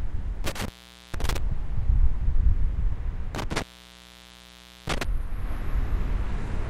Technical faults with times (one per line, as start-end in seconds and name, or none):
0.44-1.38 intermittent contact
3.35-5.05 intermittent contact